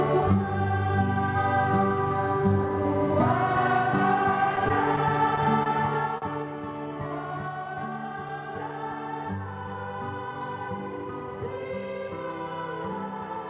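Between 4.56 and 5.68 s the audio has scattered short gaps: roughly seven lost packets, none much over 30 ms, each patched by extending the previous sound, heard as separate ticks and smears. At 6.18 s a single short stall from a late packet holds the sound for 39 ms before resuming where it left off, so nothing is lost. The call path's narrow band, with nothing above 4 kHz as expected from G.711 A-law, stays constant throughout.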